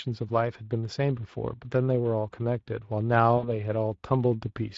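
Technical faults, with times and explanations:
Throughout: Speex codec damage is plainly audible, with a hoarse, noisy grain on the speech and a thin, hissy fill at the top. This points to a rate near 21 kbps, where the CELP excitation is starved of detail. The grain stays constant, unlike a momentary dropout.
3.37 to 3.45 s: VoIP packet loss concealed by the speech codec. About 60 ms of audio went missing, which suggests three lost frames. The decoder extrapolated from its last pitch and filter, fading the gain, instead of leaving silence, and the sound stays weakened briefly afterwards.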